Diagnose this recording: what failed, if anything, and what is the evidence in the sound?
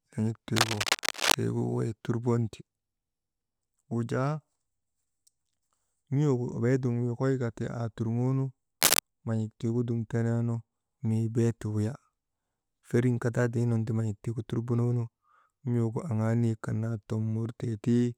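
Cable scratch noise, at the analogue wiring stage. Ragged scratching runs from 0.56 to 1.34 s at about the speech's level, then a shorter, louder burst at 8.81 to 9.00 s, just before "nan̰ik tiigu dum teneenu". Likely a worn connector being jostled, its contact resistance flickering.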